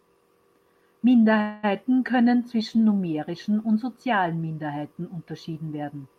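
Speech with a call audio freeze from 1.41 to 1.76 s: the sound stretches into a fading buzz, likely from a starved jitter buffer. Unlike a dropout, nothing is lost, and it resumes at "können zwischen numerischen und".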